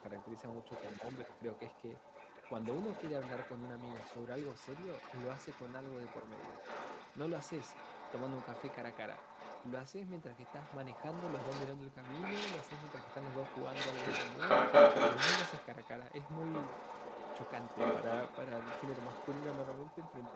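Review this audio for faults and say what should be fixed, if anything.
A second voice runs under the speech for the whole clip, from 0.0 to 20.36 s. It is about as loud as the main talker. This is the other side's voice leaking through. The far end was likely played on a loudspeaker and only partly removed by the echo canceller. Using a headset, or tuning the echo canceller on the talker's device, would prevent it.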